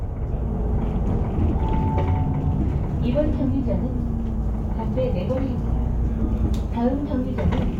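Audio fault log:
0.00–2.86 s, crude rate conversion: a faint, gritty inharmonic fizz rides on the louder, brighter moments, well below the sound itself. Samples were linearly interpolated to a new rate without filtering, which fits a 44.1 kHz to 48 kHz change, so aliased tones unrelated to the material appear.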